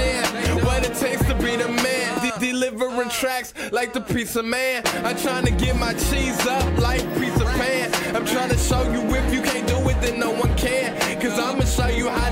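Nothing in the clip stands out as a technical fault at any point along the way.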